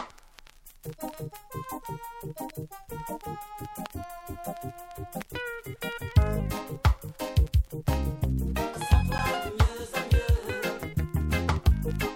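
At 9.18 s a single sharp tick marks a block of digital silence, a 10 ms dropout where the output buffer likely went unfilled and the sound cut out abruptly.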